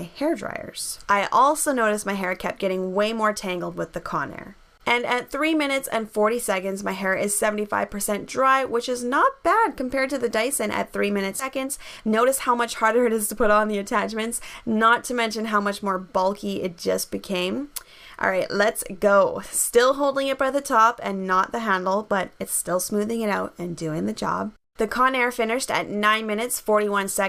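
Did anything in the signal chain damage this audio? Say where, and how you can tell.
Yes. In the network path or its jitter buffer, about 0.7 s of audio was discarded while later packets were already queued, so playback jumps forward abruptly at 11.39 to 11.41 s, with no gap. This is a skip ahead.

The jitter buffer then ran fuller than its target and trimmed short pitch-period slices repeatedly. This jitter buffer speed-up plays 11.49 to 14.70 s about 10 % fast at unchanged pitch, recovering roughly 0.3 s.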